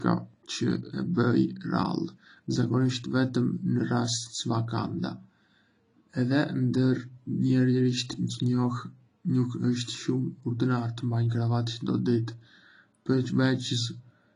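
Throughout the speech, likely low-bitrate audio saved at a high bitrate: the MP3 re-encode cannot restore what was lost, so nothing sounds above 10.1 kHz.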